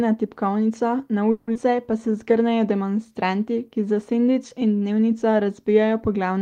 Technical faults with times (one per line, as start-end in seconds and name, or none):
1.31-1.57 long network dropout
1.76-2.56 jitter buffer slow-down